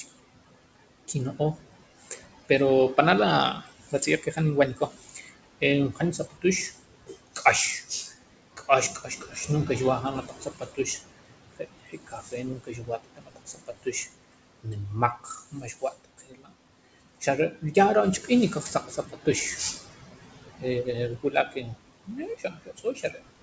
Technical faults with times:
0.00-23.42 noise suppressor artifacts
1.08-2.98 speech cut by the noise suppressor
3.54-16.53 speech cut by the noise suppressor
17.20-19.84 speech cut by the noise suppressor
20.60-23.42 speech cut by the noise suppressor

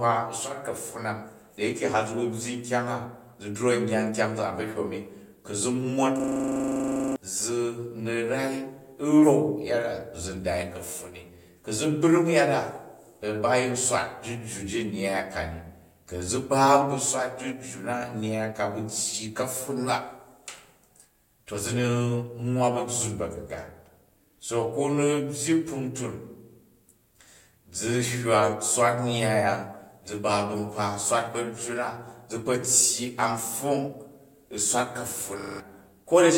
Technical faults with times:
6.20-7.16 system hang loop
35.40-35.60 system hang loop

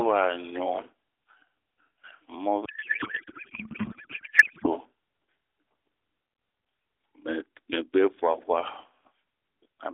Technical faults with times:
2.66-4.67 codec payload misread

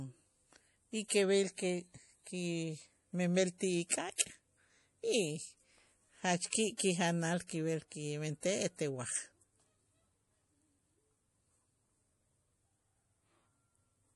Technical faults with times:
0.00-14.16 MP3 compression
4.16-4.19 pre-echo

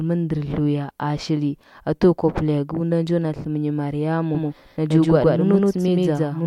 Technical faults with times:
4.35-6.46 doubled audio track

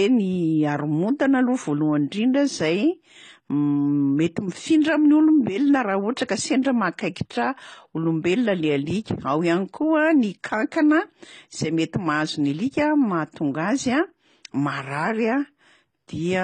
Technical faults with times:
0.00-16.43 transcoding between lossy codecs

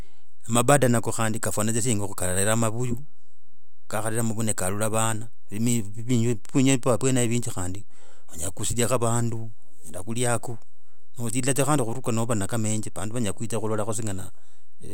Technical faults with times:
0.00-14.94 DC offset

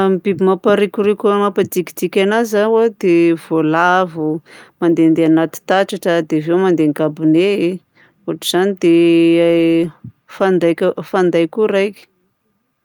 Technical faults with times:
none

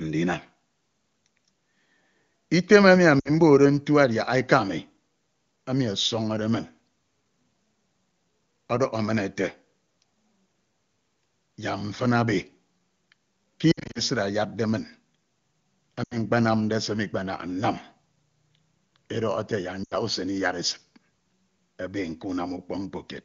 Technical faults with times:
3.19-3.30 lost AMR speech frames
13.71-14.01 lost AMR speech frames
16.04-16.17 lost AMR speech frames
19.83-19.95 lost AMR speech frames

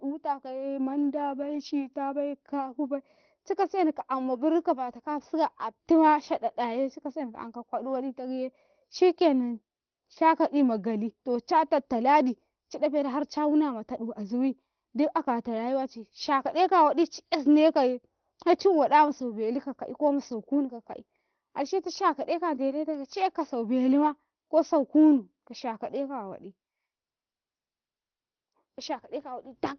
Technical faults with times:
none

